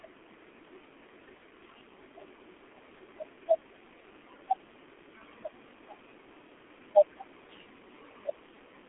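From start to finish the speech carries heavy G.723.1 codec damage. This low-rate telephony coder works in 30 ms frames at around 6.3 kbit/s, and it passes nothing above 3.8 kHz. The line band runs from about 250 Hz to 3.5 kHz. Its voice model updates slowly, so the speech sounds muffled and hoarse and the consonants smear. On a spectrogram the energy stops hard at a ceiling near 3.8 kHz, and the harmonics look blocky and coarse.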